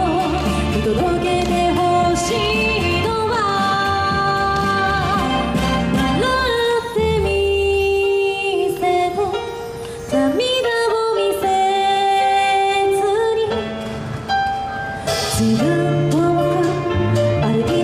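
No technical faults can be heard anywhere in the audio, with the signal holding steady and continuous for its whole duration.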